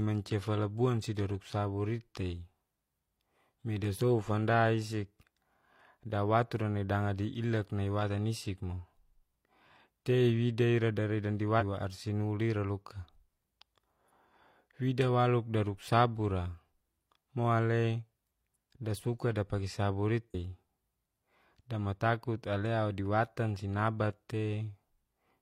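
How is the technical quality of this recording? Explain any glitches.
The recording has two brief glitches, both from damaged data in the compressed stream. At 11.57 to 11.63 s, just after "ira dari dandi", and again at 20.30 to 20.35 s, corrupted bytes make the decoder misread frames and lose sync while it hunts for the next valid header. Each is heard as a short chirp or blip of about 50 to 60 ms.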